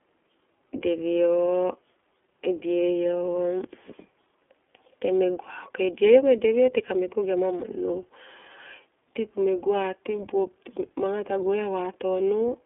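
The speech carries iLBC codec damage from start to finish. The band is cut to a telephone line, roughly 300 Hz to 3.4 kHz, with nothing above 3.7 kHz. That leaves the sound thin and muffled. The codec rebuilds each short frame on its own. The texture fits 20 ms frames at around 15.2 kbps. This gives a plainly audible rough, buzzy, synthetic edge. Sibilants lose their crispness.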